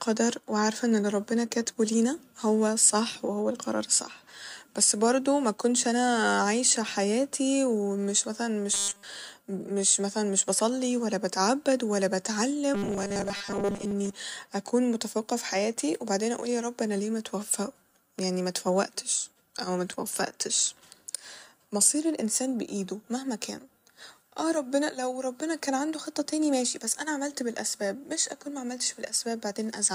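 Audio likely arrived too seldom, with a roughly 5 ms buffer looped to fill gaps. The result is robotic sound from repeated short buffers: a rigid 200 Hz metallic buzz. It runs from 8.74 to 9.04 s after "مش مثلا", entirely, and from 12.75 to 14.12 s before "أكون متفوقة ف حياتي", mostly.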